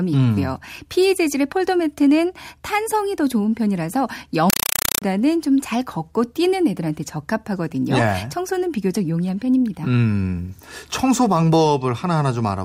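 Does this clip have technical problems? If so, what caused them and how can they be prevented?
Yes. From 4.50 to 5.02 s the speech is replaced by a compressed stream played as audio: harsh, loud chattering static. The pattern points to an AC-3 (Dolby Digital) bitstream, probably around 192 kbps, being treated as ordinary PCM. Each encoded frame comes out as roughly a 4 ms burst of noise followed by silent padding, repeating 31.25 times a second, which gives that buzzy rattle. To prevent it, make sure the receiving end recognises and decodes the bitstream, or set the source to send decoded PCM.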